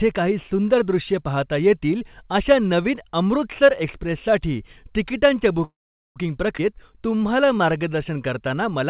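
At 5.64 s the speech stalls in a call audio freeze that lasts until 6.18 s, most likely because packets were held up and the jitter buffer ran dry. The receiver carries the last sound on for a short moment as a fading buzz or hiss, then goes silent for about 0.43 s. On a spectrogram, a brief smeared band decays into a blank column. When the speech resumes it continues from where it stopped, so the whole 0.52 s is inserted delay with nothing lost.

Just after, at 6.58 s, comes a skip ahead. Roughly a tenth of a second of speech is dropped, and the two sides are spliced with only an 8 ms bridge. It sounds like a clipped jolt, with a fragment of sound simply absent. The waveform shows an abrupt change in envelope at the join, and the spectrogram shows formant tracks that jump instead of gliding.

From 6.67 s to 7.84 s a jitter buffer slow-down rebuilds the reserve. The receiver repeats individual pitch periods, adding 110 ms in total, so the speech plays at about 91% speed while the pitch stays unchanged. 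Vowels sound slightly drawn out. A spectrogram shows harmonics stretched sideways at constant spacing, and the waveform shows identical cycles recurring back to back. Throughout the clip the call path leaves nothing above 4 kHz, which fits narrowband telephone coding.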